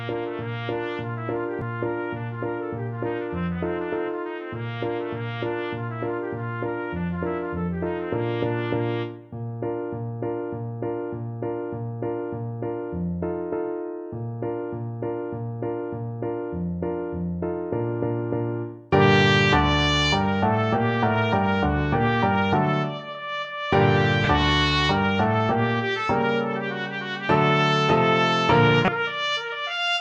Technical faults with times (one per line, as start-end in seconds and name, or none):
1.61 damaged data in a compressed stream
24.24-24.27 damaged data in a compressed stream
28.85-28.88 damaged data in a compressed stream